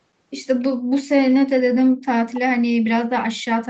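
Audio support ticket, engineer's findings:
1.47–2.25 s: speech chopped and dipped, roughly 40 dB at deepest, about half a second lost in pieces. Likely speech suppressed in double talk, echo canceller ducking near-end alongside echo. Gating tracks far-end activity, not packet-loss glitches or codec warble.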